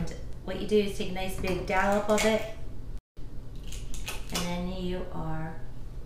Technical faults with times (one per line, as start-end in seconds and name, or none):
2.99-3.17 playback stall